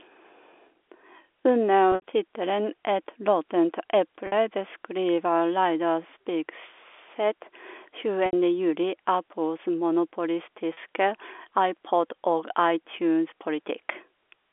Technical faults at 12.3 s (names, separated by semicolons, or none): none